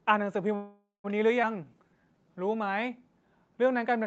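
From 0.55 to 1.06 s a call audio freeze is heard, most likely because packets stalled in transit and the jitter buffer ran dry. The receiver stretched the last sound into a fading buzz or hiss that ends in about 150 ms of silence, inserting roughly half a second of gap before the audio resumes where it left off, with nothing lost.

At 1.42 to 1.45 s comes a skip ahead: a stretch of audio was discarded while later audio was already queued. Playback jumps forward almost seamlessly, dropping something like a sixth of a second, so the two sides of the cut butt directly together.

From 1.56 to 2.47 s a jitter buffer slow-down follows as the buffer rebuilds its reserve by repeating single pitch periods. This adds 139 ms, so the speech runs at 86% speed with unchanged pitch, sounding drawn out, all within the 8 kHz band of the Opus call path.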